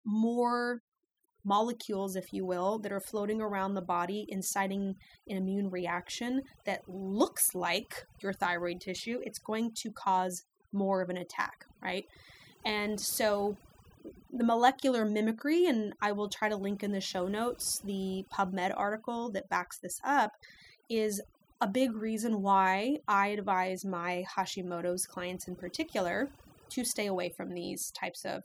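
From start to finish the recording carries overdone noise removal. The noise reduction was pushed far too hard, so every frequency band sitting near its noise estimate got pulled way down or shut off entirely, taking the quieter parts of the speech along with it. You hear the background drop and break up into little twinkling specks.

At 14.83 s there's a single sharp click, the kind you'd see as a thin vertical line across the spectrum. The likely cause is dropped samples: something like a couple of samples, only a few hundredths of a millisecond, went missing, so the waveform jumps straight from one value to a later one. That gap is far too brief to lose any actual sound, which is why all you get is the tick.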